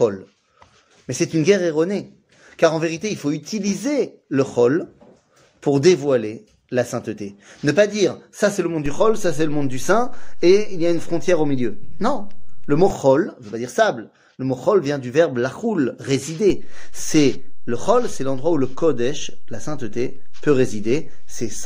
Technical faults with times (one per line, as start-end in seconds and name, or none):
8.86-12.90 DC step
16.50-21.66 DC step